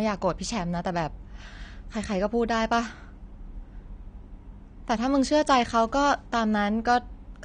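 From start to finish the speech sounds dull and smeared, with a fizzy, warbling edge on sibilants and held vowels. The cause is likely AAC compression, which fits AAC-LC at about 32 kbps. On a spectrogram, the high-frequency cut-off sits low.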